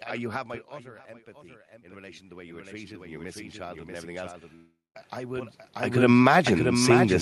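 Throughout, a doubled audio track is heard: a second, full-band copy of the speech trails by about 0.7 s at roughly 5 dB lower, likely from a second capture path, appearing on a spectrogram as dry, shifted repeats of each syllable. From 1.69 s to 5.60 s, automatic gain rising lifts the gain by about 13 dB, so speech and background swell together, and the waveform envelope widens steadily. Between 4.55 s and 4.97 s, a long network dropout likely loses about 0.4 s of audio; a fading buzz or hiss fills the gap, then about 0.19 s of near-silence shows as a blank spectrogram band.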